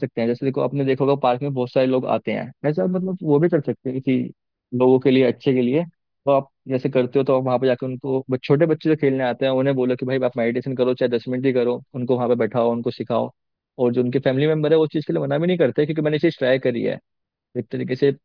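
Listening to the speech recording, nothing in it stood out as a technical problem.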